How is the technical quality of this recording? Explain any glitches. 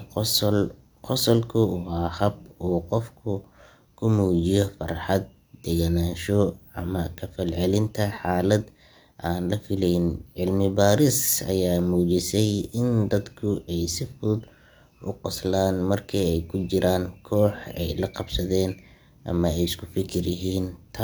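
No technical faults turn up anywhere in the recording, so there are no glitches to explain.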